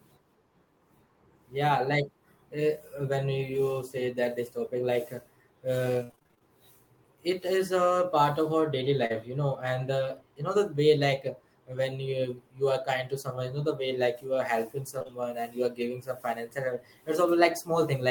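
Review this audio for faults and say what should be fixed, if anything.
Repeated packet loss (robotic sound) runs from 6.03 to 6.42 s. Nine gaps fall in that stretch, the longest 61 ms. The receiver patched each hole by extending the previous sound. Over half the span is synthetic fill, so the speech turns choppy and robotic. A larger jitter buffer and forward error correction would help here.

Short concealed packet loss occurs at 9.06 to 9.13 s, after "part of our daily" and before "you know and uh". About 40 ms went missing there and was bridged from the preceding sound, stretching the passage slightly. It occurs again at 14.99 to 15.10 s, after "you are helping" and before "and you are giving". That spot has three back-to-back holes of about 20 ms each, heard as a brief smear. Both spots need a steadier network path with less loss and jitter, backed by redundant packets.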